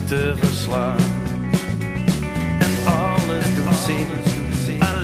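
A second copy of the signal, most likely picked up again through a slower capture path or left out of step by an edit, gets mixed into the output from 2.40 s, producing a doubled audio track that runs to the end. The copy trails the original by roughly 0.7 s at about 5 dB lower, full-band and completely dry, with no decay or room colour. It cuts in abruptly, so everything after that point is heard twice, the repeat clearly separated from the original.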